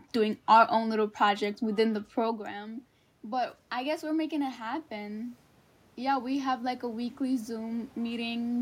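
From 6.06 to 8.53 s, automatic gain rising: after the input drops by about 13 dB, the gain climbs about 4 dB, swelling voice and room noise together.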